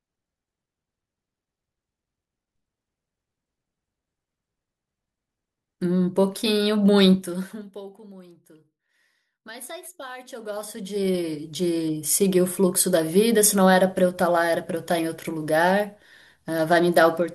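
A speech clip in which the level drops, from 7.06 to 7.80 s, in audible stairs rather than a glide, with a fast ticking riding on the voice, then climbs back the same way from 10.31 to 11.42 s. This is zipper noise: the gain is moved in 3 dB steps going down and 2 dB steps coming up, around ten times a second, over roughly 25 dB, each unsmoothed jump leaving a small click.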